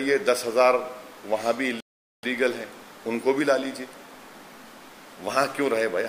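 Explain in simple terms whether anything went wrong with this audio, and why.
Something did go wrong. At 1.80 seconds the sound suddenly cuts out. It stays silent until 2.23 seconds, a gap of about 0.43 seconds. This is a playback stall. The player likely ran out of data, or got held up, and briefly stopped producing sound.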